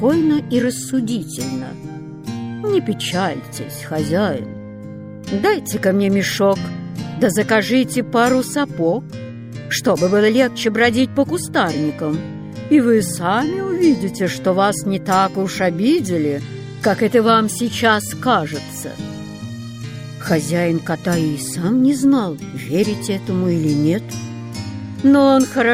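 No dropouts, clicks, distortion or level jumps turn up anywhere in the signal, which holds steady throughout.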